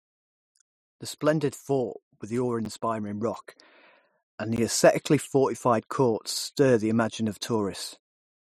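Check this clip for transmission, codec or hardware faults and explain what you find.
Two brief dropouts interrupt the speech, at 2.65 s and 4.56 s. The first is heard as a sharp tick rather than a gap; the second, fuller because its hole is 16 ms against 9 ms for the first, comes across as a short hole. Both are a block of digital silence: a run of samples set to zero, typically when the output buffer isn't filled in time. The signal drops straight to silence and returns with no fade.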